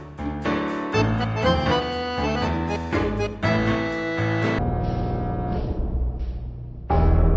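From 4.59 s to the end, the audio shows a wrong sample rate fault. The samples are clocked out far slower than they were captured, with no resampling, so speed and pitch drop together. Playback runs at 0.363 times normal speed and everything falls about 17.6 semitones, nearly an octave and a half. The sound becomes slow and deep. That ratio fits 44.1 kHz material being played at 16 kHz.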